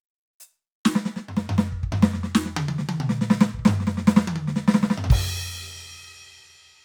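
Music with no audible faults.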